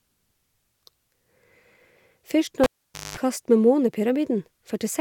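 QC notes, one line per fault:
2.64–3.17 s, cable pulled and plugged in: the lead is pulled and reinserted. A pop drops the speech to near silence for about 0.49 s. A 0.2 s burst of 50 Hz mains buzz follows while only the tip touches, then a second pop restores the sound.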